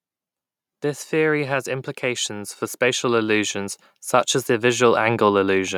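From 1.1 s to 3.81 s the voice and the background noise swell together, growing about 6 dB louder just before "such as the". This is automatic gain rising: the gain control judged the input too quiet and slowly raised its gain.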